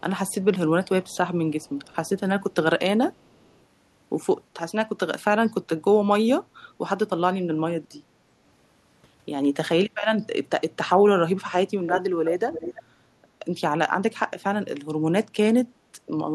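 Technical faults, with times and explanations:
0.29–0.35 s, 1.09–1.17 s, 1.61–1.96 s and 3.24–3.59 s: echo leak. Faint scraps of the voice return 365 ms late, about 35 to 40 dB down. The far end's echo canceller likely let loudspeaker pickup through.
11.83–12.01 s, 12.25–12.36 s and 12.52–12.83 s: echo leak. A much stronger delayed copy, only about 5 to 10 dB below the speech, arrives 331 ms late. The cause is likely incomplete echo cancellation on a speakerphone.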